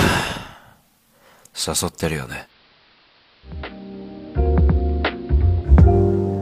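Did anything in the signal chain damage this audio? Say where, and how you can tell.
Yes. Digital radio blending to analogue at the receiver, 2.42 to 5.73 s: a 105 ms crossfade to AM drops the level about 5 dB and brings up hiss about 30 dB below the signal.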